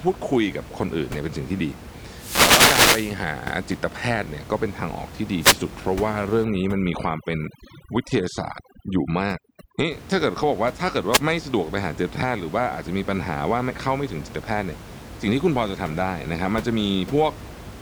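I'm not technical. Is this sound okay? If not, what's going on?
No. The wireless microphone's radio signal briefly faded, letting receiver noise through. That wireless microphone noise hit sounds like a swish or burst of static at 2.14 to 3.19 s, 5.39 to 5.57 s and 11.11 s. From 6.44 to 9.91 s, overdone noise removal stripped out too much, leaving a lowered background broken up into twinkling, warbling specks.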